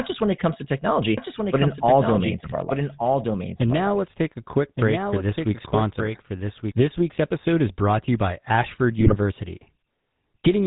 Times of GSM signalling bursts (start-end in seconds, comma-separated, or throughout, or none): none